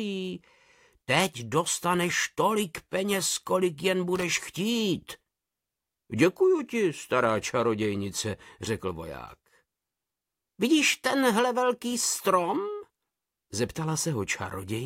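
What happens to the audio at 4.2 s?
At about 4.15 to 4.23 s there's a short burst of loose connector crackle: a worn contact briefly makes and breaks, chopping the signal into an irregular scratchy rattle.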